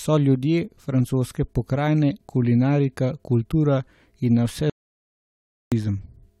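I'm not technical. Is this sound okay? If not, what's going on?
No. The audio input was likely lost briefly, leaving an audio dropout to silence: from 4.70 to 5.72 s the speech cuts to total silence, and that second of speech is gone.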